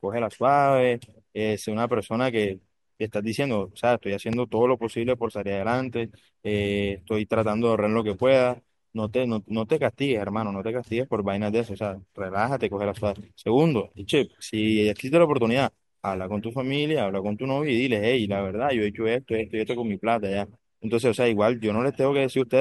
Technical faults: loud pop

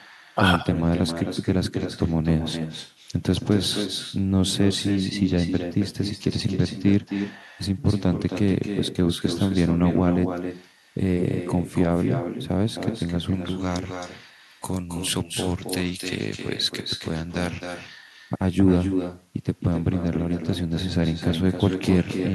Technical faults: echo with no canceller; pre-emphasis left on

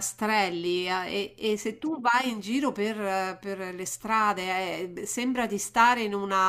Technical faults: none

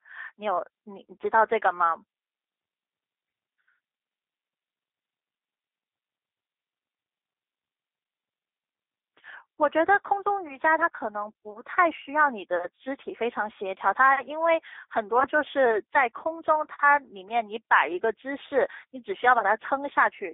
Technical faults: G.729 codec

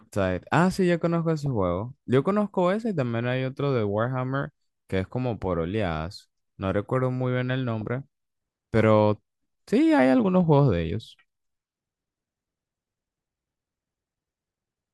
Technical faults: DAB burbling

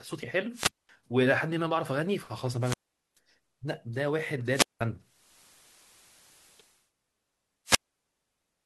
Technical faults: wireless microphone squelch dropout; digital radio blending to analogue

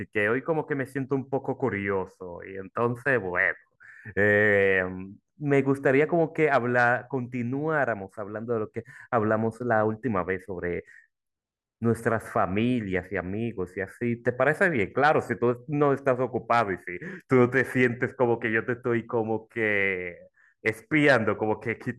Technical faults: none

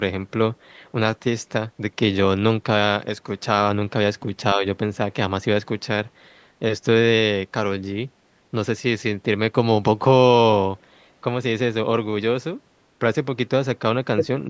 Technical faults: speech suppressed in double talk

